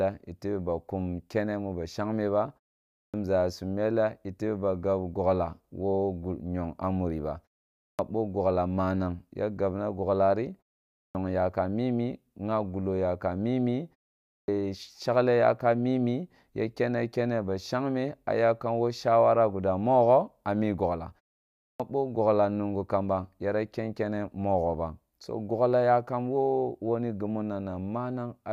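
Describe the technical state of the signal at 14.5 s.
At 14.5 s the signal is just recovering from a clipped start after a pause. From 14.26 to 14.48 s, following a 0.39 s gap, the output path was still waking, so about 221 ms of speech onset is missing and the sound begins abruptly from silence.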